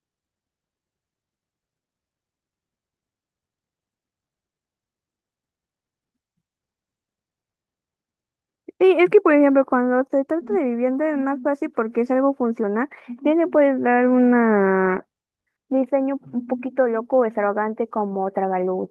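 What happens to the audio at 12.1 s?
At 12.1 s the speech carries on intact, with nothing breaking into it beyond the ordinary band-limited sound of the call path it has come through.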